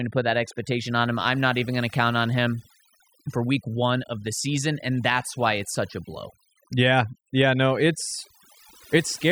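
A noise reduction stage set too aggressively has processed this speech recording from start to finish. That is overdone noise removal. It cuts frequency bands that sit near the noise estimate, taking quieter parts of the voice with them. The background drops and breaks up into twinkling specks.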